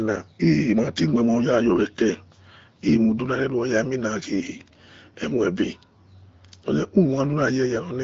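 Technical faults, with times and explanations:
No technical faults can be heard anywhere in this speech.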